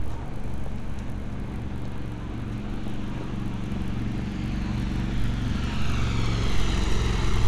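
A faint 50 Hz buzz rides on the sound throughout: the resampler restarted on every 20 ms block converting 48 kHz to 24 kHz, leaving small errors at each block edge.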